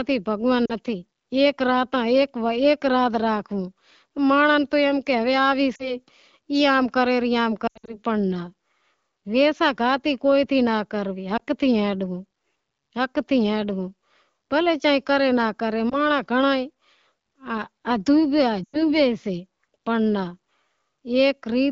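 Lost AMR speech frames occur at 0.65–0.73, 5.75–5.95, 7.67–7.97, 11.37–11.40, 15.89–15.99 and 18.64–18.83 s. Radio errors corrupted frames, so the decoder repeated the last good settings at falling gain. Single losses give brief warbles. The scattered 7.67 s burst and the 18.64 s run smear and fade before the wideband speech returns rough.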